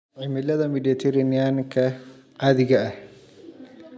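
From 0.05 to 3.0 s the speech and background swell together by about 12 dB: automatic gain rising, as the control judged the input too quiet.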